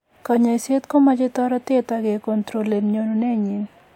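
No technical faults can be heard anywhere in the recording.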